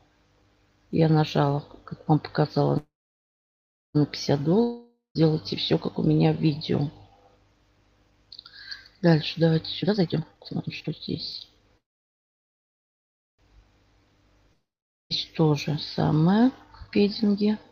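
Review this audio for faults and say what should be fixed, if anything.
Packets were likely held up in transit at two points, and the jitter buffer ran empty: a call audio freeze from 2.77 to 3.97 s and another from 11.78 to 13.41 s. Each time, the receiver stretched the last sound into a fading buzz that fell to silence, for about 1.05 s and then 1.57 s. The audio then resumed exactly where it had stopped, so nothing is missing, but 1.17 s and 1.61 s of extra delay were inserted. Better network prioritisation for the call traffic, or a larger adaptive buffer, would prevent these stalls.

Two long network dropouts likely came from audio that never arrived at all, at 4.63 to 5.17 s and at 14.53 to 15.12 s. In each, the receiver briefly concealed the gap with a decaying buzz, then went silent for about 0.14 s in the first and 0.44 s in the second. When the audio came back it had skipped ahead, losing about 0.52 s and 0.58 s of content respectively. 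A more stable link, or forward error correction, would keep these stretches from being lost.

After the delays, the jitter buffer held more audio than its target and trimmed itself down. It did this by cutting out short pitch-period slices many times in a row, which is a jitter buffer speed-up. From 9.82 to 13.91 s the audio plays at 127% speed, shedding roughly a second, and this overlaps the second freeze. From 16.52 to 17.64 s it runs at 110%, losing about a tenth of a second. Both passages sound hurried at unchanged pitch. Smoother packet delivery would remove the backlog that triggers this catch-up.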